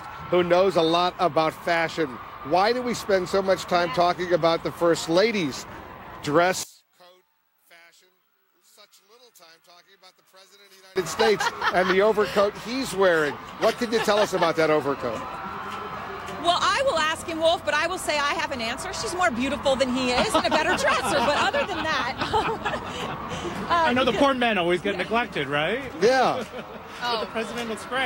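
From 6.63 to 10.96 s the audio, background included, falls about 30 dB and then returns. One channel inverted is the likely cause: reversed polarity cancels the shared content in the mono sum. Unlike a dropout, a quiet residue remains rather than silence.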